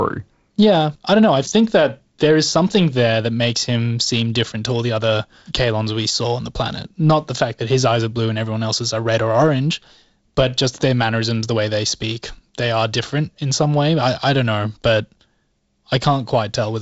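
No faults are present in this speech; it carries the expected character of G.722 wideband telephone coding, with nothing above about 7.7 kHz and the light upper-band hiss and slightly noisier lower band that fit the codec's 48 kbit/s mode.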